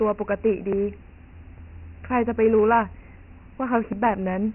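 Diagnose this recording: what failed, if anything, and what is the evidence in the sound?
The whole clip has gone through Dialogic VOX ADPCM coding, a codec-stage fault. Nothing reaches above 3 kHz, and a heavy, gritty hiss rises and falls with the speech, which fits 4-bit ADPCM at 6,000 samples a second (24 kbps). Simple band-limiting would sound dull but clean. Here the grain tracks the level of the speech.

At 0.73, 1.58 and 3.93 s the speech jumps forward, and roughly 40 ms of sound is missing each time with no gap of silence. This points to the driver or buffer stage, most likely a dropped buffer (overrun) where the two sides are spliced directly. Packet loss would more typically leave a silent gap or a smeared, concealed patch.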